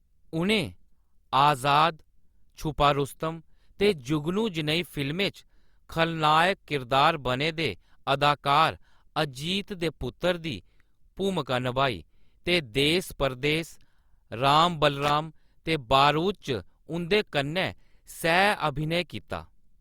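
A speech recording with a short burst of loose connector crackle from 15.03 to 15.10 s, roughly 76 ms of irregular scratching. An intermittent contact in the signal path made and broke repeatedly, chopping the signal and adding pops from any DC present on the line.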